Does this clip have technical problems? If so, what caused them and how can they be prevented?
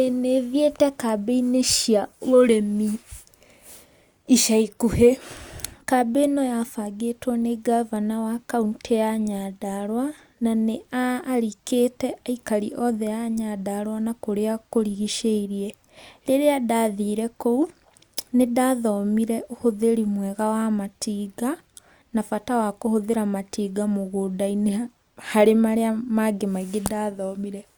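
No, this speech recording has no technical faults to point to. With no problem present, there is nothing to trace to a cause and nothing that needs preventing.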